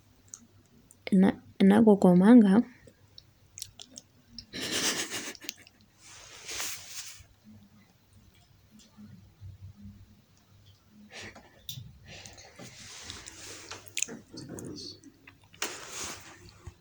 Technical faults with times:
none

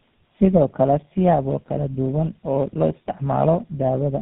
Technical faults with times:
0.00-4.21 tandem speech coding

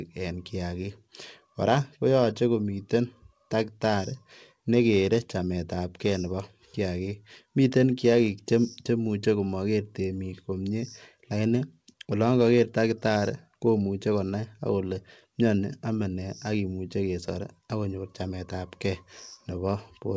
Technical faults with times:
none

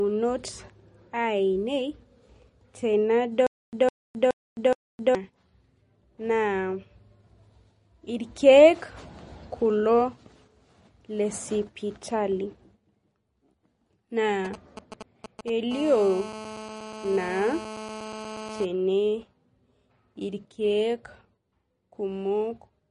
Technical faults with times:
0.00-22.91 MP3 compression
3.47-5.15 stutter with silent gaps
14.45-15.72 GSM signalling bursts
15.72-18.65 GSM phone buzz

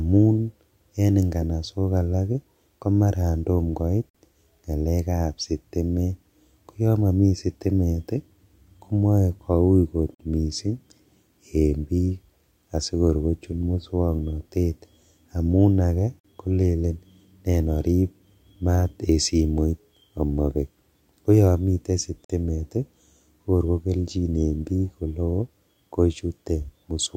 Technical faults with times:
4.09-4.14 gap between chunks
10.14-10.19 gap between chunks
16.19-16.24 gap between chunks
22.24-22.29 gap between chunks

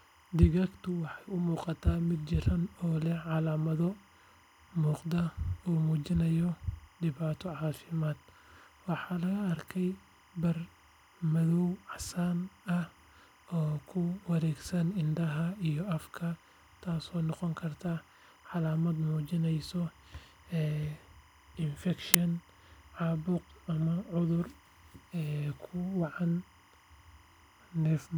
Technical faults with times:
0.00-28.18 timecode bleed
22.14 uninitialised buffer

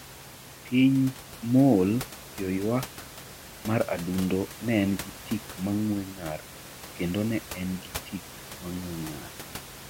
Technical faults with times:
none

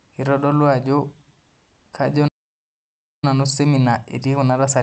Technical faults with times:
2.27-3.24 playback stall
3.24-4.83 time-compressed catch-up

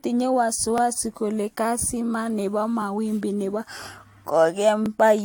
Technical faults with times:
0.00-5.25 generation loss
0.78-0.80 overlapping chunks
4.86-4.88 overlapping chunks

